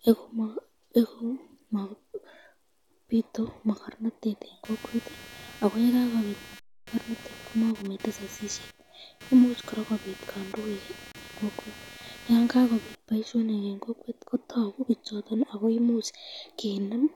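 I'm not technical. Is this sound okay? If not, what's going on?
No. From about 4.6 to 13.0 seconds there is computer activity noise: a buzzy, scratchy pulsing, roughly 200 times a second. The computer's own electrical activity leaks into the audio wiring. Unlike a steady mains hum, it comes and goes with what the computer is doing, not with the speech.

There are also two underruns with held sample, at 6.60 to 6.87 seconds and at 11.12 to 11.15 seconds. The playback briefly ran out of audio, so the sound froze flat, then carried on exactly where it stopped. That is why any click there is only soft. A true dropout would lose part of the speech.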